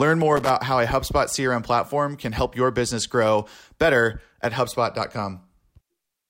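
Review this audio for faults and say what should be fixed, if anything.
Loose connector crackle appears from 0.37 to 0.50 s, a short irregular burst of scratching just before "how a". A worn or dirty contact in the signal path is briefly making and breaking as the cable or plug shifts, chopping the audio in rapid fragments, with any DC present on the line turning each break into a pop. To prevent it, clean or replace the suspect connector and secure the cable so it cannot move during recording.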